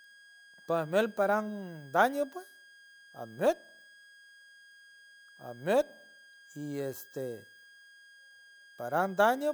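From start to finish, a switching supply whistle sits under the speech: a thin high tone wandering between about 1.62 and 1.64 kHz, roughly 25 dB below the voice. A power converter is cycling at an audible rate, and on a spectrogram it draws a faint, slightly wavering horizontal line.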